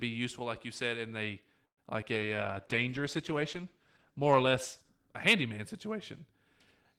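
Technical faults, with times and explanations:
1.65 to 1.79 s, call audio freeze: Just after "you said in a", the sound stalls. The last moment is drawn out briefly and then falls to near silence for about 110 ms. When the audio returns, it picks up exactly where it stopped, with nothing skipped, and everything after runs about 120 ms later. The likely cause is delayed packets draining the jitter buffer. Unlike packet loss, this is an inserted pause, not a hole.
2.01 to 2.04 s, short concealed packet loss: Still close after "you said in a", a brief smear or wobble of under 30 ms passes. About 20 ms of real audio never arrived. The receiver covered only the first few milliseconds by extending the preceding sound, then blended back into live audio. This one is far shorter than the freeze, adds no delay, and does remove content.
2.14 to 4.97 s, call bitrate drop: From here until just before "a handyman", the encoder's rate falls from 32 kbps to 13 kbps and stays at that floor for about 2.8 s. 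Coding with so few bits makes the sound grainy and watery, and the upper frequencies are trimmed, so it turns dull. A dropout would be brief, but this degradation lasts seconds and lifts once the bitrate recovers.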